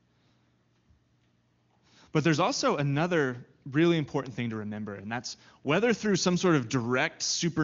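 No technical faults are audible.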